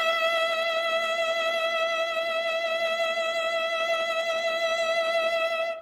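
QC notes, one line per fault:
Throughout, Opus compression. The music sounds rough and grainy, and sustained tones have a noisy, hashy texture. The damage is plainly audible. The top end still reaches about 20 kHz, so the sound is not muffled. The likely cause is Opus in its music mode running short of bits, which fits a rate near 16 kbps. The encoder keeps each band's energy but fills detail with copied lower bands or noise.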